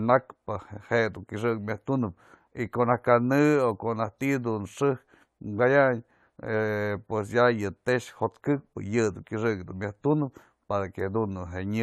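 From start to finish the speech carries generation loss: a swirly, hollow coloration with smeared consonant attacks, likely from repeated lossy re-encoding, about four passes, in a form that fits an AAC-LC chain at 96 kbit/s. Each pass requantises on a shifted frame grid, so noise and spectral holes pile up. Unlike a single low-bitrate encode, the damage sounds worse than that bitrate would produce on its own.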